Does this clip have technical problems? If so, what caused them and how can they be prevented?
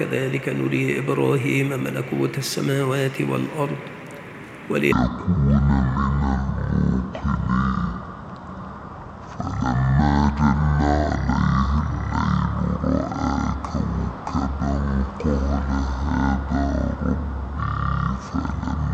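Yes. From 4.92 s right through to the end, there's a section at the wrong speed: everything plays at about 0.514 times its original rate, so it drags along at roughly half speed and drops by around ten semitones, making the sound deep and sluggish. Because speed and pitch fall together, this is likely a clock mismatch, with that stretch played or rendered against a sample rate about half what it was captured at. To prevent it, check that the sample rate is consistent across recording, editing and export, and listen back to each section before bouncing.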